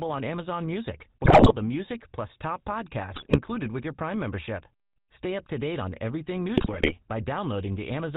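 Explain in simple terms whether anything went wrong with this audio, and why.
Yes, a couple of things. The whole clip has the clearly audible rough, gravelly sound of the GSM full-rate codec, an old mobile phone codec that also drops everything above 4 kHz. On top of that, there are three bursts of GSM bit errors, where corrupted data garbled the decoder and the speech breaks into squawks and gargling: 1.24 to 1.53 s, just before "the music plus top"; 3.14 to 3.38 s, between "the music plus top" and "with your"; and 6.56 to 6.94 s, right after "to date on everything".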